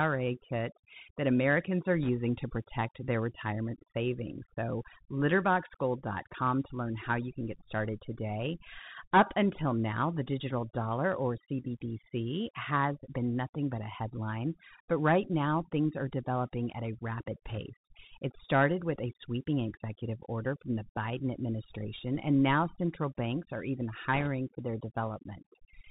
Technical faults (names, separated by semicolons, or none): overdone noise removal; Bluetooth CVSD headset codec; bit errors on a Bluetooth voice link